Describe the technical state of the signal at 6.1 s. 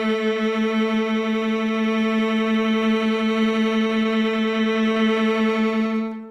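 At 6.1 s a jitter buffer slow-down is under way, running from 5.97 to 6.28 s. The receiver repeated short pitch periods to rebuild its reserve, stretching the music to 82% speed and adding 63 ms. The pitch holds, but sounds drag out.

A doubled audio track also sits under this moment, as it does throughout: a full-band copy of the music trails roughly a tenth of a second behind, about 5 dB quieter, with no decay or room colour. It is likely a second capture through a slower path.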